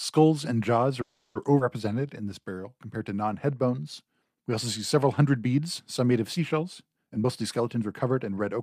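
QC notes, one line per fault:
1.01–1.36 s, call audio freeze: just after "and jaws" the sound stops advancing and the last fragment is stretched into a fading buzz for 340 ms, likely from packets held up in transit emptying the jitter buffer. Nothing is lost, only delayed. A spectrogram shows smeared, repeating harmonics decaying, and the waveform shows a looping, shrinking pattern.
1.59 s, skip ahead: playback jumps forward, dropping roughly a tenth of a second of speech, with only about 10 ms bridging the join. The two sides meet almost directly. The waveform shows an abrupt splice, and the spectrogram shows formants changing in one step.
1.89–2.70 s, jitter buffer slow-down: leading into "compared to non head", the speech runs at 87% speed with pitch unchanged, as single pitch periods are repeated to add 114 ms of reserve. Sounds feel drawn out. The spectrogram shows stretched formant segments at constant harmonic spacing.
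6.99–8.60 s, jitter buffer speed-up: after "some made of seashells", speech runs at 117% speed at the same pitch, as short pitch-period pieces totalling roughly 0.3 s are cut to shrink a surplus buffer. Delivery sounds hurried. The spectrogram shows compressed syllables with unchanged harmonic spacing.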